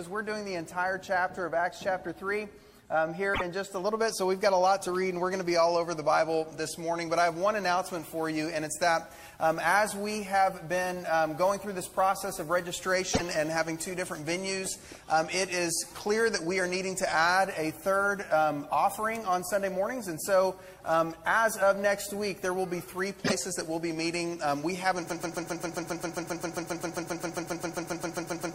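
At 3.33 to 3.42 s, 13.13 to 13.21 s and 23.24 to 23.32 s the audio skips forward and a brief glitch, about 84 ms long, fills the gap. Each burst spans roughly three 26.1 ms frames, the pattern of a broken MP3 bit reservoir. Frames were most likely cut from the stream, so the frames just after each cut reach back for data they had stored earlier and decode someone else's bytes instead.

From 25.10 s to the end, a 133 ms fragment repeats back to back 26 times, a mechanical stutter lasting about 3.4 s. This is a broken-record loop, likely caused by the player, encoder or stream stalling and resending the last fragment it held. Whatever should have played over those final seconds never arrives.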